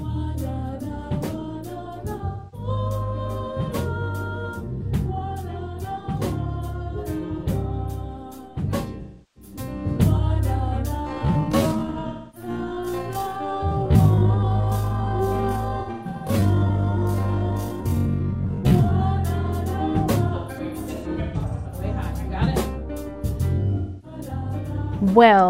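AAC frame loss with concealment appears at 2.27–2.68 s, 9.01–9.51 s, 11.91–12.49 s, 15.80–16.33 s, 20.28–21.83 s and 23.77–24.18 s. Each time, the decoder patches missing audio from the last good spectrum, leaving smeared, noisy, phasey stretches. Most gaps of 256 to 341 ms fit six to eight lost frames, while the 20.28 s event breaks about 811 ms of loss into short bursts. A time-stretched section spans 10.95 to 18.99 s: the pace abruptly drops to 0.532 times normal while pitch holds, so the audio drags. This is likely software repeating short slices to fill a set length.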